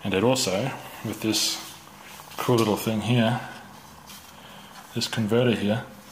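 No technical faults occur anywhere in the clip.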